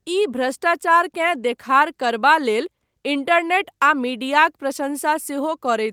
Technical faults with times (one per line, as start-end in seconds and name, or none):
none